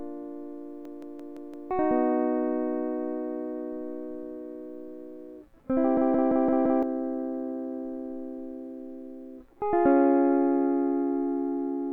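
A machine-gun stutter of a 171 ms fragment repeating five times, about 5.9 per second, hits the music from 0.85 to 1.71 s and again from 5.97 to 6.83 s. Each is a system hang loop: playback froze while the hardware kept cycling one buffer, which fits an 8192-sample size, and roughly a second of music goes missing each time.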